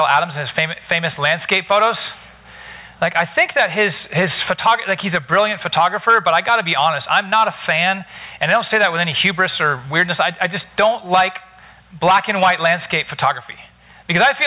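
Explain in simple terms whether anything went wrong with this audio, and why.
Gain pumping runs through the whole clip, from start to finish. The level keeps getting pulled down whenever something loud comes in, so it seems to breathe in and out by a large amount. Loud and soft moments end up sounding squashed toward the same level. The likely cause is the input gain being set far too high, with a fast limiter or compressor constantly clamping it back down. The muffled, phone-like top end, with nothing above about 4 kHz, is just the G.711 call path doing its normal job.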